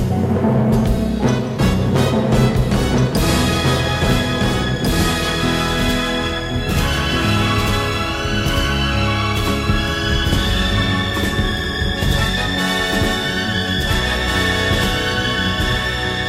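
Throughout, a doubled audio track: an equally loud copy lags about 1.5 s, likely from slower recapture or an edit, so every waveform and spectrogram shape repeats.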